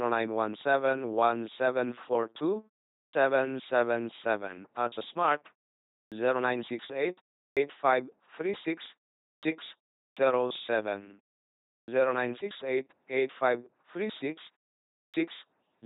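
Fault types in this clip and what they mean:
LPC-10 vocoder, throughout: The speech passes through a 2.4 kbit/s LPC-10 coder, and the damage is heavy. Instead of keeping the waveform, the coder models the vocal tract with a filter of up to ten poles and drives it with either a pulse train or noise, treating every moment as fully voiced or fully unvoiced. The result is a buzzing, mechanical voice. Nothing is present above 3.8 kHz.
Clipped start after a pause, at 3.06, 6.04, 7.5, 9.35, 10.09, 11.8 and 15.06 s: Each of these onsets follows a silence of 0.37 to 0.68 s. The playback device idles during the quiet and needs time to wake before sound gets through again. Between 67 and 79 ms is lost at each restart, so the speech jumps in abruptly without its first sounds.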